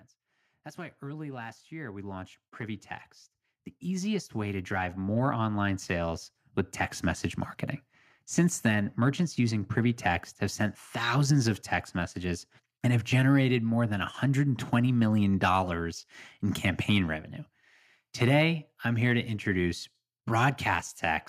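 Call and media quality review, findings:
Automatic gain rising, 0.75 to 9.77 s. Speech and background noise floor swell together by about 17 dB over roughly nine seconds. Probable component: capture-side AGC judging input too quiet, ramping gain slowly upward. Waveform: envelope widens steadily across the span. Spectrogram: whole band, noise floor included, brightens evenly with no spectral change.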